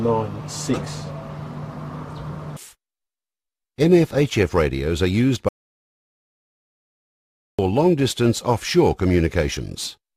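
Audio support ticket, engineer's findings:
Audio dropout to silence, 5.49 to 7.59 s. Input path likely lost, from a disconnected device, a failed link or a mute, while the recorder kept writing silence. Sound cuts off abruptly, then 2.1 s of dead digital silence with no room tone, and the content in that gap is lost.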